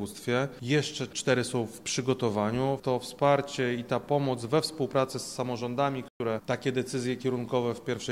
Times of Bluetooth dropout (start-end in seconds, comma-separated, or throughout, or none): 6.08-6.20